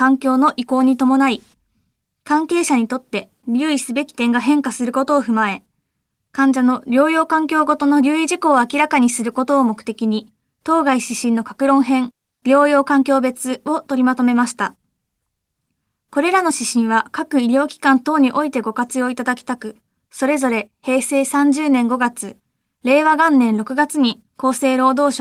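Throughout the speech, clock drift between sender and receiver shows up: the sender runs around 4 percent fast, so the receiver's buffer keeps overfilling, unlike random network jitter. From 0.09 to 25.06 s, repeated timing corrections trim short slices to hold pace at 104 percent, giving faint, uneven hiccups that always drop material and never leave silent gaps.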